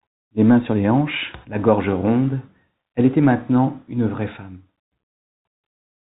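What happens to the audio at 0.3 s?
Nothing goes wrong at 0.3 s; the speech passes through intact, carrying only the narrow, band-limited character of G.711 telephone coding.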